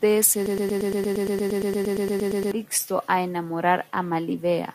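From 0.46 to 2.52 s the player or stream likely stalled and kept resending the last fragment it held, a broken-record loop: one 116 ms slice of speech repeats 18 times back to back, a stutter, and the speech due in that span never plays.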